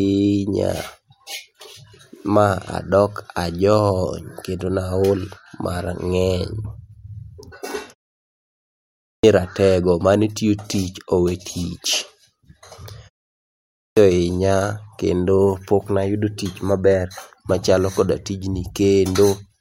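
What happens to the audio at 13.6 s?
Right around there you're hearing a clipped start after a pause. After a short gap of about 0.36 s, the output seems to have dozed off and needed time to wake back up, so roughly 0.6 s of speech, from 13.37 to 13.97 s, just never makes it out. The talking then pops in abruptly at "ohinya kendo poknayudo", with its opening sounds missing.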